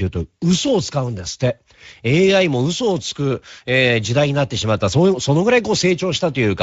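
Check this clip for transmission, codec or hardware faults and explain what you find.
One codec fault runs through the whole speech clip: Speex codec damage, plainly audible from start to finish. A CELP coder that has to fit into something like 17 kbps leaves little room for the excitation, so speech sounds hoarse and grainy rather than clean. That roughness is tied to the voice itself and never becomes a separate hiss, which is what sets it apart from added background noise.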